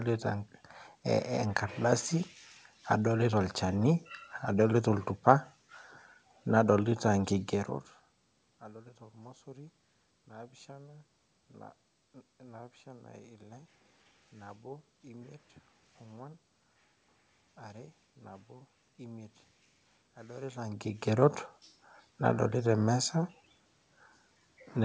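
No technical faults can be heard in this recording.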